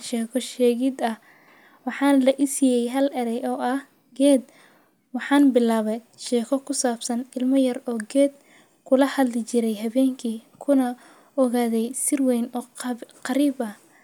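No technical faults are audible.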